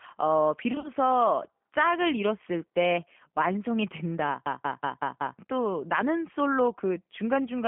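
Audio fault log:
throughout: G.729 codec. The audio was carried by a low-rate speech codec, consistent with 8 kbit/s G.729A, which rebuilds speech from a filter, pitch predictor and sparse pulses. The band runs only from 150 Hz to 3.4 kHz, and the rough, synthetic coding damage is plainly audible.
0.72–0.90 s: VoIP packet loss concealed by the speech codec. About 80 ms of audio went missing, scattered across 120 ms, with the longest gap 40 ms. The decoder filled the gaps by extending its last pitch and filter at falling gain, so the speech turns briefly stretched, fading and weak.
4.46–5.39 s: system hang loop. The system froze while the sound hardware kept replaying one stretch of its buffer, which fits an 8192-sample buffer. That 186 ms piece of speech repeats five times at 5.38 Hz, a machine-gun stutter that replaces about a second of audio.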